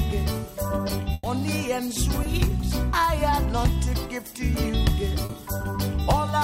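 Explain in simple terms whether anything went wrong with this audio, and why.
Yes, parts of the audio were lost in transmission. From 1.13 to 1.25 s there is a burst of packet loss: about 100 ms never arrived, so the receiver stretched the last sound out and faded it. The audio then resumes further on, with that stretch missing.

Two shorter gaps, each a short concealed packet loss, occur at 2.23 to 2.27 s (20 ms) and 5.25 to 5.31 s (40 ms). The receiver briefly continued the preceding sound to cover each hole, then blended back in, leaving a small smear or wobble.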